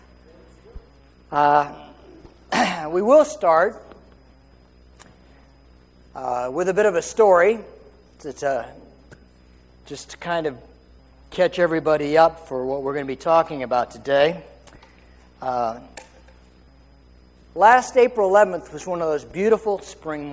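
The sender's clock runs roughly 1% slower than the receiver's, so clock drift between sender and receiver starves the jitter buffer throughout. The receiver has to stretch what arrives, and small, unevenly spaced timing hiccups recur across the whole clip.

Repeated timing corrections answer that drift by repeating short pieces. From 0.06 to 4.93 s the audio plays at 99% speed, adding about 70 ms. From 6.87 to 20.04 s it again plays at 99%, adding about a fifth of a second. Both stretches are heard through a call codec band-limited to 8 kHz, consistent with G.722.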